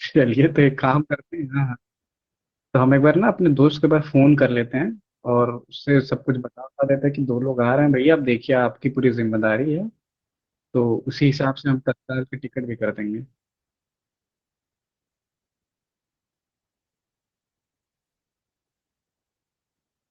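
No technical faults occur anywhere in this speech recording, so there is nothing to describe in time order.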